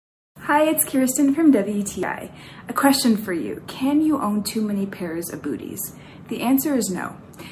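No faults are audible anywhere in the clip.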